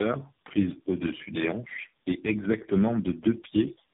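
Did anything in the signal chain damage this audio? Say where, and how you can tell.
Yes. Tandem speech coding at the codec stage runs through the whole clip. The speech sounds rough, muffled and warbly, with nothing above 3.5 kHz. That fits about four speech codecs in series, such as AMR-NB, CVSD and GSM full rate, each re-encoding the previous one's degraded output.

GSM signalling bursts enter the analogue wiring from 2.29 to 3.25 s, just after "des hanches est". A galloping ticking with a buzz repeating at about 217 Hz sits roughly 15 dB below the speech. A nearby 2G phone's radio bursts are being rectified by the audio circuit.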